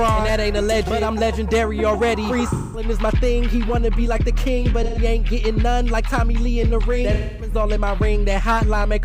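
AAC frame loss with concealment hits the audio at 2.52–2.85 s, 4.83–4.99 s and 7.14–7.54 s, gaps of about 213, 128 and 256 ms. The decoder fills each gap from the last good spectrum, leaving a smeared, phasey patch.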